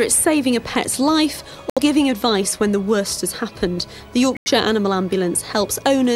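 At 1.70 s and again at 4.35 s the sound cuts abruptly to silence for about 90 ms and 130 ms: corrupt frame muted. Damaged compressed frames were rejected by the decoder and replaced with silence, gaps consistent with several consecutive frames, while timing stays intact.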